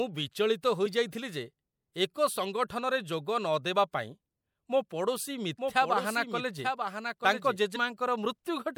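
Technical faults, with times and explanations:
0.85 s and 7.75 s: compressed frames skipped. The speech jumps ahead by roughly one frame at 0.85 s and two frames at 7.75 s. That is about 30 ms and 50 ms lost, which fits 26.1 ms frames. Overlapping frames smear each join into a short blip, not a click.
5.58 to 7.56 s: doubled audio track. A second full-band copy of the speech runs about a second behind, roughly 5 dB quieter. It has no decay or room colour. It starts and stops abruptly. This likely comes from a second, slower capture path.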